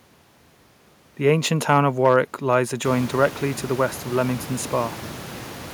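From about 1.69 to 2.16 s there's hard clipping: the speech runs roughly 3 dB hotter than the stage can pass, so the peaks get sliced flat and you hear a brittle crackle on the loudest bits rather than a full fuzz.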